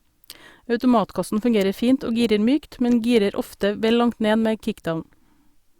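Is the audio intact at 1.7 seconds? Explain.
Yes, at 1.7 seconds the speech plays through cleanly, with no dropout, click, distortion or other fault at that moment.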